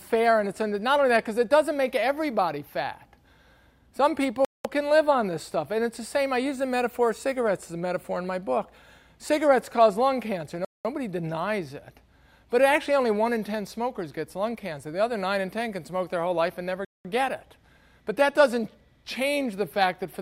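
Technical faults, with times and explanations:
4.45 s, 10.65 s and 16.85 s: gap between chunks. Each time the sound drops to silence for 0.2 s, with abrupt edges on both sides. The holes recur every 6.2 s, which fits audio delivered in 6-second chunks with a 200 ms pause inserted at each join. Nothing is cut away. The sound simply halts and resumes where it left off. This is why the breaks sound like clean interruptions rather than skips.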